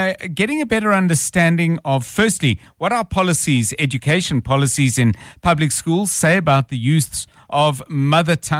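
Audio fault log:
No faults detected in this clip.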